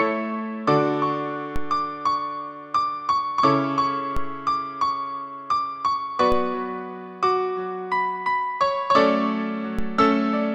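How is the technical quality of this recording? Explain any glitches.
Four low thumps interrupt the recording, at 1.56, 4.17, 6.32 and 9.79 s, each a single click-like knock while the sound carries on unchanged. These are DC steps. At each moment the waveform's zero line jumps abruptly by about -16 to -17 dBFS, and that sudden shift registers as a thump. A high-pass around 2 Hz then pulls the offset back toward zero over a fraction of a second, so no lasting bias remains.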